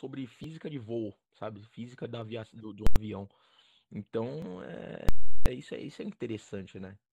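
Speech, with two faults. Overlap between stream segments removes about 16 to 18 milliseconds at 0.44 s and 4.42 s, on 2 s segment boundaries, leaving a visible waveform discontinuity with a thin vertical spectrogram line. Invalid numbers at full scale pin the output flat at one extreme value from 2.87 to 2.96 s and from 5.09 to 5.46 s, which fits 4096- and 16384-sample blocks. Each block is a solid flat-topped slab on the waveform, with broadband bangs at its edges and silence between.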